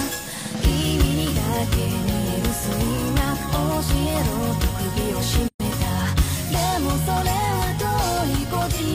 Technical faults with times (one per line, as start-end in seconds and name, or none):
5.48-5.60 gap at a join of encoded pieces